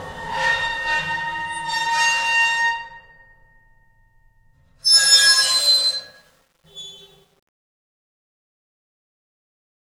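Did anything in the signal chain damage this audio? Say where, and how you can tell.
Yes. From 4.95 s to the end at 9.90 s, the fade-out turns gritty and grainy, worst from 6.65 s onward. This is truncation distortion on a fade at a sample-format or gain stage: without dither, the falling level is quantised to coarse steps, consistent with roughly 10-bit resolution.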